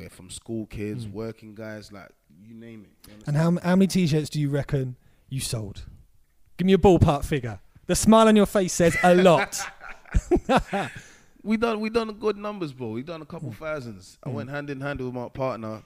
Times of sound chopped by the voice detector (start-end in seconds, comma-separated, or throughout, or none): none